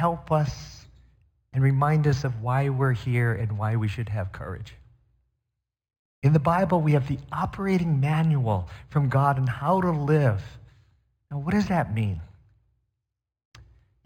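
Throughout, sibilants carry a faint metallic shimmer over a dulled top: imaging from linear upsampling, leaving mirrored copies between 5.5 and 11 kHz, which fits an 11 kHz source.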